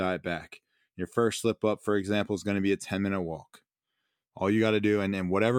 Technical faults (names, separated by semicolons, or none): none